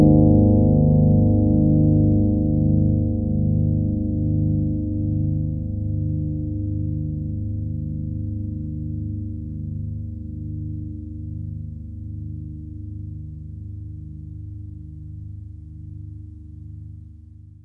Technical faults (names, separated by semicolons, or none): none